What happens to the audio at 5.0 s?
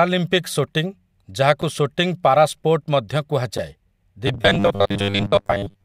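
At 5.0 s the speech has collapsed into a rigid, metallic buzz fixed at 100 Hz, still loosely tracing the syllables. This robotic sound from repeated short buffers runs from 4.27 s to the end at 5.84 s. The likely cause is audio arriving too seldom, so the playback fills gaps by looping the last slice, here about 10 ms long, which sets that 100 Hz pitch. Roughly two-thirds or more of the sound in that stretch is repeated material rather than real audio.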